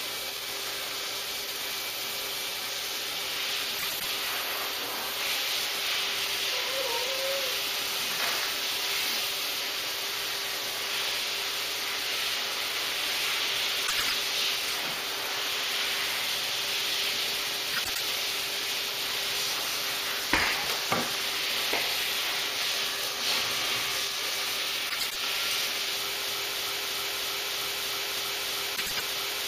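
A brief garbled flutter appears at 3.78–4.05 s, 13.87–14.14 s, 17.73–18.00 s and 24.89–25.15 s. These are frames out of order: two adjacent blocks of about 104.5 ms, which fits runs of four frames, play swapped. From 26.28 s to the end a 316 ms fragment repeats back to back about ten times, a broken-record loop, likely a stalled stream resending its last fragment. The flutter recurs within it at 28.76–29.03 s.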